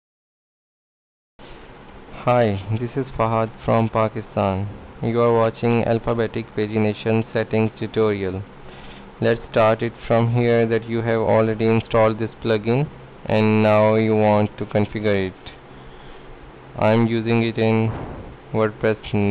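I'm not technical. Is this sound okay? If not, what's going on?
Yes, no faults here.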